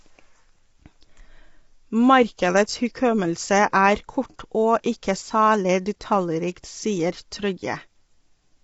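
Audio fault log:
Throughout: low-delay AAC compression. The speech is plainly rough and grainy, with noise between the pitch harmonics and nothing above 7.8 kHz. This is likely AAC-ELD at about 24 kbps, whose short frames resolve harmonics poorly; simple band-limiting would leave the speech clean.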